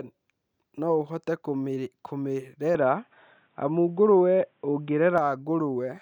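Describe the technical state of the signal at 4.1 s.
At 4.1 s the speech sits inside an input switched to a poorer device, from 2.75 to 5.18 s. The input likely changed to a narrower-band microphone. Nothing above 3.8 kHz survives, so the sound turns dull and boxy. The level shifts by about 5 dB, with a faint new noise floor.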